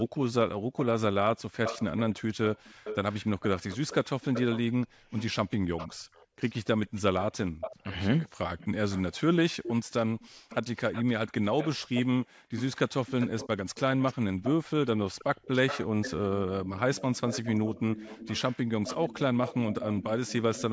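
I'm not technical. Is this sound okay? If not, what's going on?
No. Throughout, from 0.0 to 20.63 s, there's an echo leak: a quieter copy of the speech trails about a third of a second behind, likely from a loudspeaker the echo canceller didn't fully catch.

There's also background gated by the echo canceller: the room sound briefly cuts out at 0.67 to 0.72 s and again at 12.35 to 12.51 s, then returns.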